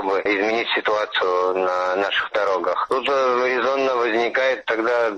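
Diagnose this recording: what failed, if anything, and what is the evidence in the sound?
No fault found in this recording.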